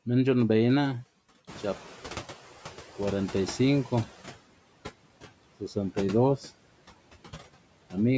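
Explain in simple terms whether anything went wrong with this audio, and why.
Throughout the recording, the background noise dips between words and creeps back up underneath them. These are noise suppressor artifacts: the call software keeps guessing which parts are steady noise and turning those down moment by moment, so the leftover noise rises and falls instead of staying even.

Around 1.5 s the room gets noticeably noisier, and from 1.47 s to 4.36 s that extra noise comes through louder than it should before gradually sinking back. This is the noise suppressor catching up: the sudden rise in room noise arrived faster than the suppressor could relearn what counts as noise, and it took about 2.9 seconds to adjust.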